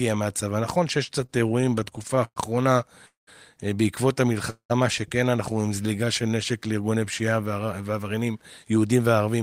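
From 1.21 to 2.38 s the speech hits repeated stalls (stutter): fourteen little hitches where packets turned up late, the buffer kept running dry, and the last sound got stretched to cover it. The longest hold is 114 ms, and about 22% of that stretch is filler. Nothing's actually lost, it just drags and catches.

Then come two call audio freezes, at 3.06 to 3.29 s and at 4.50 to 4.72 s, each likely a burst of packets held up in transit that emptied the buffer. The last sound hangs on as a fading buzz, then drops to silence for 160 ms in the first and 100 ms in the second, before the speech resumes where it left off. That puts gaps of 211 and 196 ms in the timeline.

Between 5.52 and 6.22 s there's a jitter buffer slow-down. The receiver was topping up its reserve by repeating tiny pitch-period slices, adding 83 ms. Playback runs at about 89% speed with the pitch unchanged, so things sound slightly drawn out.

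From 7.91 s to the end it flips into a jitter buffer speed-up. The buffer had more audio than it wanted, so short pitch-period chunks got trimmed, around 150 ms in total. The speech plays at about 111% speed with the pitch intact and comes across a bit hurried.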